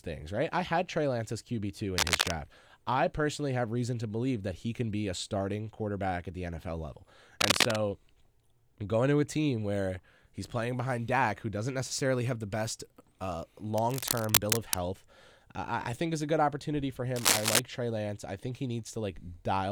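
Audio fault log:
1.97–2.31 s, 7.41–7.77 s, 13.78–14.79 s and 17.16–17.60 s, cable scratch noise: bursts of scratchy, rustling noise lie over the speech just before "I personally have reason", after "have the best uh" and after "a good opportunity for". Three bursts sit about 5 dB above the speech. The longest, at 13.78 s, is roughly level with it. The likely cause is a worn contact whose resistance jumps as it moves. Spectrograms show ragged broadband smears, and waveforms show dense, uneven spikes.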